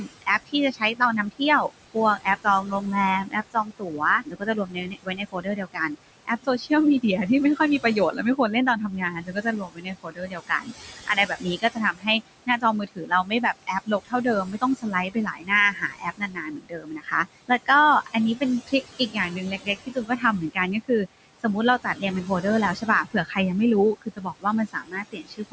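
Throughout, the background sinks in the pauses and swells under the speech: noise suppressor artifacts, the suppressor pulling steady noise down by about 20 dB. The same suppressor cuts speech it mistakes for noise, leaving soft consonants and word endings swallowed or faint by about 12 to 22 dB within stretches at 0.02–2.83, 3.25–6.71, 7.56–8.39, 8.91–17.69, 18.06–21.45, 21.84–22.44, 22.75–23.38 and 23.97 s to the end.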